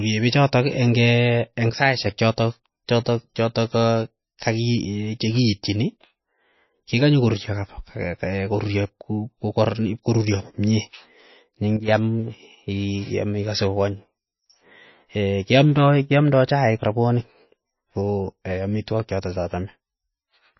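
Throughout the speech, everything above 5.8 kHz is missing and the compression damage is plainly audible, giving a dull, watery quality. This is MP3 compression, likely at a low bitrate around 25 kbps, where the encoder trims treble and discards weak frequency detail to save bits.

From 1.70 to 2.06 s, just before "chotok chotok chotok", and again from 11.77 to 11.88 s, the speech and background noise drop together by about 8 dB in an instant. Each sudden gain jump is likely a digital level change applied without a smoothing ramp.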